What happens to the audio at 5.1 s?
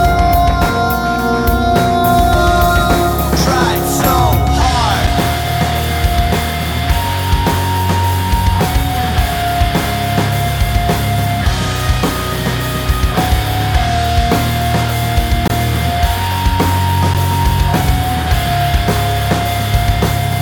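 At 5.07 s there is a block of digital silence. About 5.4 ms of the audio drops out to silence. The abrupt cut and return produce a brief tick.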